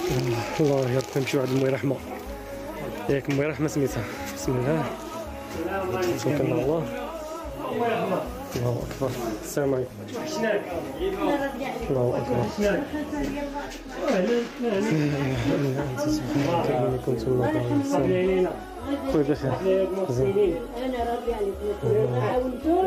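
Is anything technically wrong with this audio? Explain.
No, there is nothing technically wrong with this audio. Nothing in it points to a problem in how it was captured, processed or played back.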